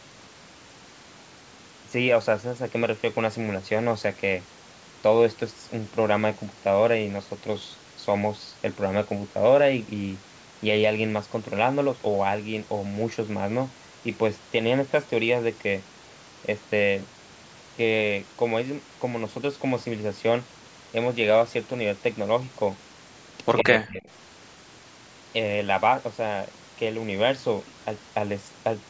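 From 23.52 to 23.64 s, a delayed copy of the speech trails about 104 ms behind, only slightly quieter: an echo leak, likely from a far-end loudspeaker's echo canceller missing it. Immediately after, from 23.63 to 24.09 s, the speech sinks by roughly 40 dB at its deepest. This is speech suppressed in double talk, likely the canceller turning down its own talker together with the loudspeaker echo.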